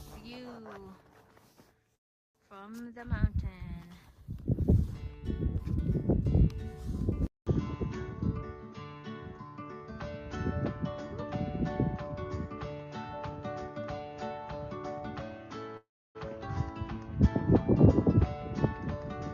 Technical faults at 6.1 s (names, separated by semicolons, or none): none